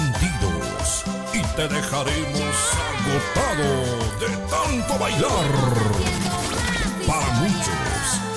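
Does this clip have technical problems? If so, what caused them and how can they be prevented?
No, the signal comes through without any audible technical fault, so there is nothing here that needs preventing.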